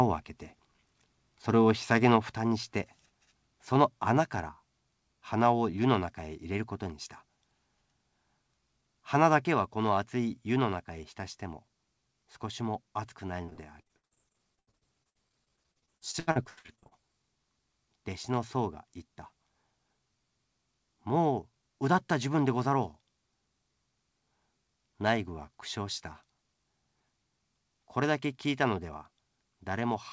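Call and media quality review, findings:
Microphone volume stepped down at 9.54 s. Likely cause is the call software's automatic gain control lowering capture-device input volume in one step. Voice and background drop together by about 2 dB, an abrupt change rather than a fade.

Repeated packet loss (robotic sound), 13.46–16.93 s. Lost or late packets, with each hole filled by extending the preceding audio. The result is a choppy, robotic stretch with dozens of gaps up to 79 ms. About a third of the span is patched.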